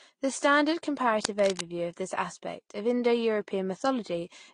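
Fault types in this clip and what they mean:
Transcoding between lossy codecs: The speech was likely encoded with one lossy codec and then re-encoded with another, with the sound pointing to low-rate AAC followed by Vorbis. The layered artefacts blur together, and nothing remains above 10 kHz, leaving the speech dull and smeared.
Cable scratch noise: A worn cable or connector was likely disturbed, its contact resistance jumping rapidly. From 1.24 to 1.67 s, just before "of this aspect of", dense, uneven scratching rides over the speech, fairly loud and not far below it in level.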